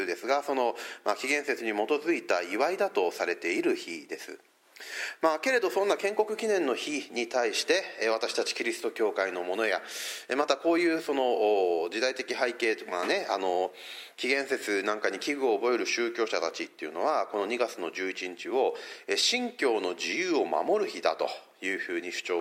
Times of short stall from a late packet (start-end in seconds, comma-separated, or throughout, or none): none